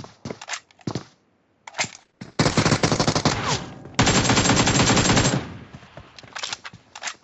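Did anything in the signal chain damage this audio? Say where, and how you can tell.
Yes, two things. The first is gain pumping across the whole clip, and it starts at the input stage. The gain keeps getting pulled down on loud sounds, with a swing of roughly 10 dB. Loud and quiet passages sit squashed close together. The likely cause is the mic gain set far too hot, with a fast limiter or compressor slamming it down each time something loud arrives.

The second is a call bitrate drop in the codec/network stage, from 1.97 s to 3.31 s. Over that stretch the sound turns rough and watery, then clears up again. The encoder was pushed from 96 kbps down to 13 kbps after the bandwidth estimate fell, and it stayed at the floor for about 1.27 s. At that rate Opus codes everything much more coarsely. The 8 kHz top end of the call path is just normal for this chain.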